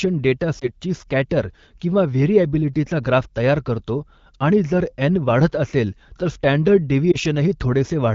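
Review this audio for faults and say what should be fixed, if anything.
There are two lost AMR speech frames, at 0.59 s and 7.11 s. Each is a single dropped 20 ms frame, so the decoder briefly reuses the previous pitch and vocal tract settings at lower gain, causing a short dip or warble. The HD Voice audio around them sounds clear, consistent with roughly 12.65 kbit/s AMR-WB. To prevent it, improve radio link quality or enable stronger channel coding so fewer frames fail their checksum.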